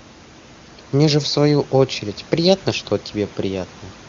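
No technical faults occur anywhere in this speech recording. A low room noise sits about 23 dB under the talker, and the speech passes through the AMR wideband (HD Voice) codec with at most faint coding traces, which fits one of its higher bitrates.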